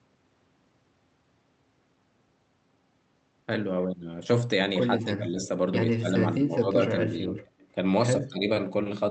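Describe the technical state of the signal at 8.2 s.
At 8.2 s the speech dips by roughly 20 dB until 8.48 s, speech suppressed in double talk, likely an echo canceller mistaking the talker for loudspeaker echo. Unlike a packet dropout, the level is ducked rather than cut to silence.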